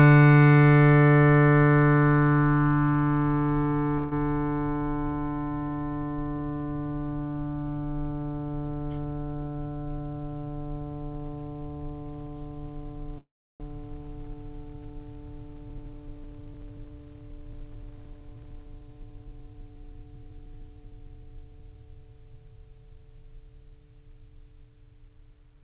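At 3.98 s and again from 13.18 to 13.62 s the music stalls in a call audio freeze, likely packets held up until the jitter buffer ran dry. The first fills about 137 ms with a short fading buzz of the last sound. The second stretches 418 ms, decaying into roughly 340 ms of silence. Unlike a dropout, nothing is lost: the music resumes exactly where it stopped, simply later. The band-limited sound, with nothing above 4 kHz, fits a 64 kbps G.711 call path.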